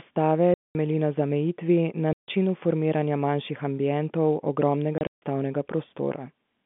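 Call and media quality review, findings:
Packet loss filled with silence: dead gaps at 0.54–0.75 s (just before "na zamejitvi na"), 2.13–2.28 s (after "na zamejitvi na"), and 4.98–5.22 s (after "manjših ambientov"). The last is broken into separate holes, about 180 ms lost in total, longest 150 ms. The gap lengths fit 30 ms packets. Hard edges and true silence, rather than smoothed or repeated fill, point to the receiver inserting zeros for lost packets, not concealment. The 150–3500 Hz G.711 A-law telephone band stays intact through the gaps.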